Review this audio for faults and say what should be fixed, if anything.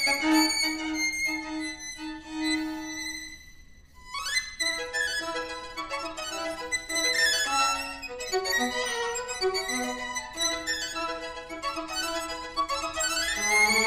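The reader took pairs of samples as single frames throughout, so the audio was read two samples at a time and plays at double speed, an octave higher. Prevent it by checking the declared channel count and sample width against the file header before decoding.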